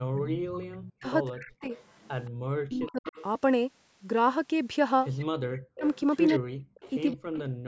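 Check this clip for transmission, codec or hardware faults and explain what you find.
Two faults are present, both pointing to a speakerphone call with an echo canceller struggling: echo leak and speech suppressed in double talk.

Echo leak, from 0.0 to 0.93 s, 1.47 to 2.3 s, 2.86 to 3.23 s and 5.17 to 7.13 s: the far end's echo canceller likely failed to remove its loudspeaker pickup. A delayed copy of the speech returns about 176 ms late, roughly 15 to 20 dB below the direct speech, and much fainter near 2 s.

Speech suppressed in double talk, from 0.13 to 1.71 s, 2.44 to 3.06 s and 5.33 to 7.44 s: with both sides talking at once, the canceller likely could not tell its own talker from echo and attenuated everything. The speech dips and breaks up, falling by as much as about 40 dB.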